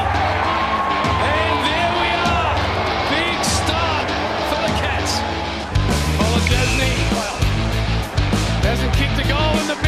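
No technical faults can be heard anywhere in the recording.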